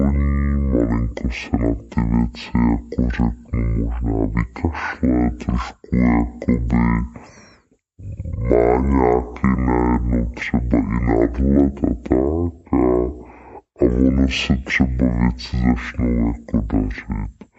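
Speech running at half speed and an octave low throughout: stereo read as mono, interleaved samples played sequentially, with a faint mirrored image filling the spectrogram's upper half.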